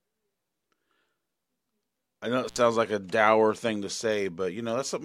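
Intermittent contact at 2.47 to 2.58 s in this speech, between "I know it" and "like a dour thing": a loose connection opens for about 66 ms, dropping the sound out with crackle at each edge.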